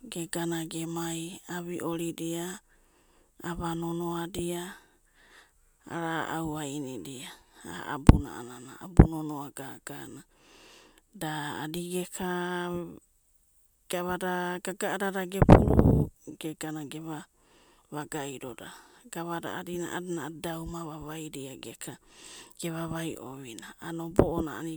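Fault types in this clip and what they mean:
No technical faults are audible anywhere in this recording.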